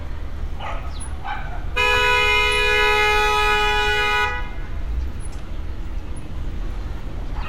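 From 1.91 to 2.07 s, DAB burbling breaks into the sound. Weak reception let bit errors slip past error correction into the MP2 data. Corrupted samples put short blips of noise into single sub-bands. The result is burbling over about seven frames.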